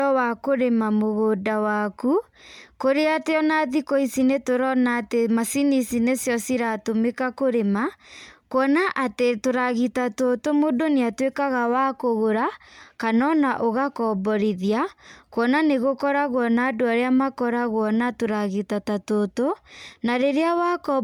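The whole 21 seconds of speech has a swirly, hollow, smeared quality with blurred attacks and nothing above 20 kHz. That's generation loss, likely from around seven rounds of MP3 encoding, each re-quantising on a shifted frame grid, consistent with roughly 128 kbit/s.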